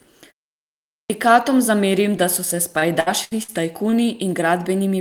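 Clipped start after a pause, at 0.80 s. After roughly half a second of quiet, the output path had dropped into an idle state and needed time to come back. About 0.3 s of speech, up to 1.10 s, never reaches the listener. The speech bursts in from silence already under way, with its opening sounds gone, so the onset feels abrupt and chopped rather than building naturally.

Repeated packet loss (robotic sound), from 2.73 to 3.51 s. Across this stretch the stream was interrupted five times in quick succession, the longest gap about 65 ms. Each hole was covered by extending the sound just before it, about 210 ms of patching in all, roughly 27 percent of the span, while around 180 ms of real speech was lost. The result is choppy, with pieces skipped.

Short stall from a late packet, at 3.90 s. Here a packet arrived about 22 ms behind schedule, leaving the jitter buffer empty for a moment. The receiver held the last sound for those 22 ms, then carried on exactly where it had stopped, so no speech is missing. 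What comes through is a brief hang or smear on one sound, a tiny buzz or dip before normal flow resumes.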